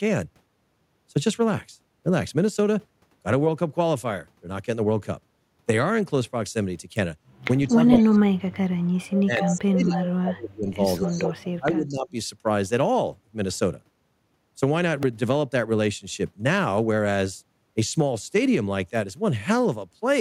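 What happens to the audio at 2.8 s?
At 2.8 s the speech carries on cleanly, with no dropout, click, distortion or other fault at that point.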